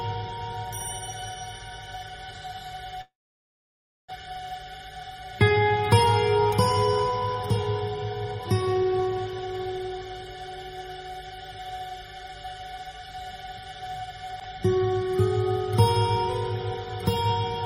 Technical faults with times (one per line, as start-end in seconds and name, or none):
3.01-4.12 long network dropout
4.21-6.07 jitter buffer speed-up
6.49-7.13 jitter buffer speed-up
8.25-10.28 jitter buffer speed-up